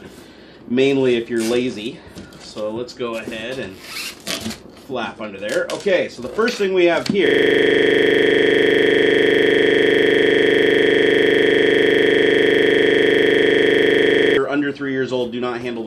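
From 7.27 to 14.37 s, the audio freezes into a system hang loop: a 40 ms slice repeats exactly, buzzing at 25 Hz as the hardware recycles its buffer. The waveform shows identical repeating tiles, and the spectrogram shows 25 Hz comb lines.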